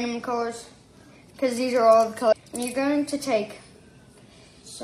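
At 2.28 to 2.33 s the sound jumps abruptly ahead with a small blip, likely a stream segment skipped after failing to load, dropping that stretch of programme.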